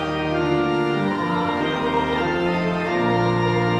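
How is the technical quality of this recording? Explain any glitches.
The recording has one clear fault. Call bitrate drop from 1.63 s to the end: the encoder's budget collapses, likely from a bandwidth-estimate fall, which fits roughly 96 down to 21 kbps, so the audio turns coarse and muffled, losing its highs.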